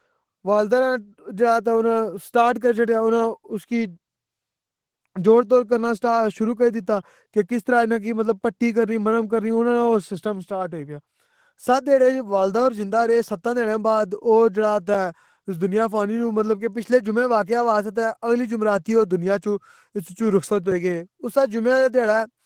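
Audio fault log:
throughout: Opus voice compression, running in hybrid mode with SILK covering everything below 8 kHz and a thin CELT layer carrying the top up to about 20.2 kHz. The excitation is coded coarsely, so the speech comes out plainly hoarse and slightly robotic, which fits roughly 16 kbps.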